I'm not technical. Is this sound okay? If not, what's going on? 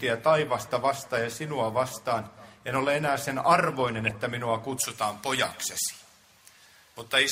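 No. From 3.86 to 4.11 s there's a short patch of digital burbling over the sound. This is DAB burbling: weak digital radio reception let a few corrupted bits slip past error correction, so short blips of noise crept into parts of the audio.

From 4.77 s to the end, the sound turns thin, harsh and hissy, with the top end far too strong. This is pre-emphasis left on: the treble was deliberately boosted for recording or broadcast, but the matching cut that should restore normal balance was never applied.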